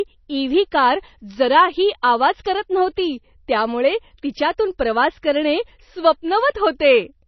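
Right from the start and all the way through, the speech carries heavy MP3 compression damage, likely from a low bitrate around 24 kbps. Nothing survives above about 5.9 kHz, so s sounds go dull and chirpy, and the weak detail swirls in and out with a watery, smeared edge on attacks.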